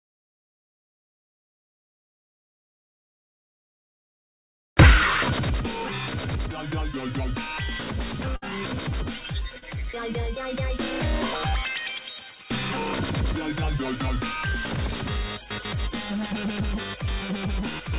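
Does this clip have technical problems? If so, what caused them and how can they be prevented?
Yes. Around 8.36 to 8.44 s there is a burst of packet loss. About 60 ms of audio never arrived in time, so the receiver stretched the last sound and faded it, giving a held buzz or dying hiss before playback resumes further on, with that stretch missing. A larger jitter buffer, forward error correction or a steadier network path would prevent it.

At 9.58 to 9.64 s, short concealed packet loss removed about 40 ms. The decoder patched the hole by extending the preceding sound and blending back, leaving a brief smear or wobble where a short sound may have dropped out. Redundant packet coding or reducing congestion on the link would prevent it. Through both events the audio carries the call codec's band limit, with nothing above 4 kHz.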